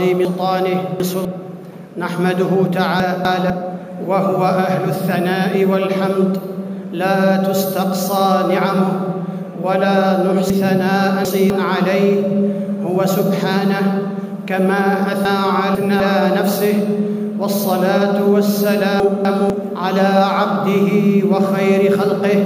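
At 0.25, 3.0, 10.5, 15.25 and 19.0 s, chunks out of order: a 250 ms block plays late, after one to three later blocks, giving a jumbled stretch with three hard joins. Unlike a dropout, no audio is missing; it only plays out of sequence.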